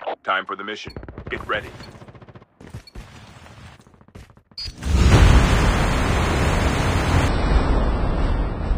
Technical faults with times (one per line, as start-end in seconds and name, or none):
7.28-8.77 section at the wrong speed